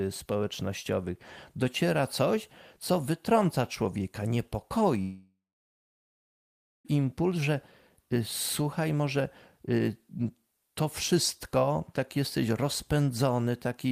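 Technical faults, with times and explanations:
5.01–6.87 s, long network dropout: the speech breaks off and the last sound carries on as a decaying buzz that fades within a few tenths of a second, leaving about 1.47 s of silence before the speech returns at 6.87 s. About 1.84 s of material is simply gone; the audio resumes further on rather than where it stopped. This is likely a loss of incoming packets, with the receiver's concealment extending the final sound until it gave up and muted.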